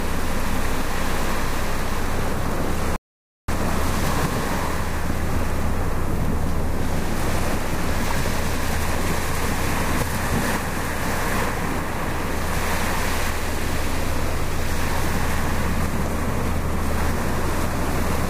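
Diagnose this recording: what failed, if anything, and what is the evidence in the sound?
A playback rebuffering stall. The sound drops to silence from 2.96 to 3.48 s, then resumes exactly where it stopped. Nothing is lost; 0.52 s is added.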